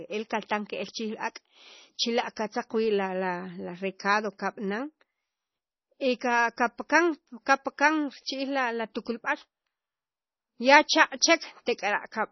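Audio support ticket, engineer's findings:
Whole clip: speech dulled, nothing above 5.9 kHz, heavy watery swirl. Likely MP3 compression starved of bits, fits about 24 kbps; weak bands flicker frame to frame.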